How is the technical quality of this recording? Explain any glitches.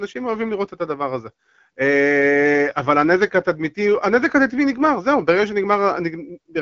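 No glitches are audible in the speech, which comes through the AMR wideband (HD Voice) codec at 12.65 kbit/s with its usual light coding texture and nothing above about 7.4 kHz.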